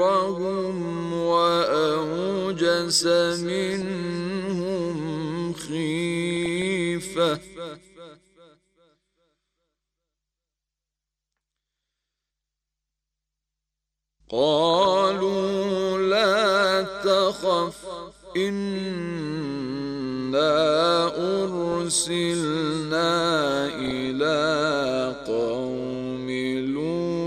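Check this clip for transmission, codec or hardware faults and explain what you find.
Two kinds of fault are present: codec damage throughout and five short bursts of reception errors.

MP2 compression: the likely cause is MPEG Layer II coding at a low rate, around 80 kbps, which starves sub-bands of bits. High bands switch off and the rest are coarsely quantised. The whole clip sounds dull and granular, with a gurgling edge and treble flickering in and out.

DAB burbling: at 3.66–3.87 s, 6.30–6.67 s, 14.70–14.85 s, 21.72–21.74 s and 23.70–24.07 s, bit errors get past error correction into the audio data. Corrupted samples put short blips of noise into single sub-bands, and corrupted scale factors make sub-bands jump in level for up to a frame.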